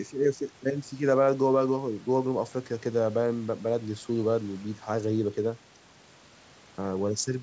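Speech, with no technical faults to report.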